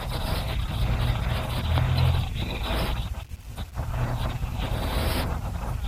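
A short speech recording with no audible technical faults: the signal holds steady throughout, with no interruptions, distortion or level problems to point to.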